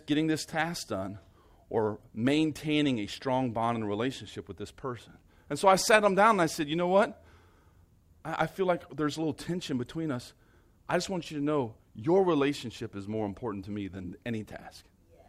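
Nothing goes wrong anywhere in this bit of speech, so there's no technical fault to point to.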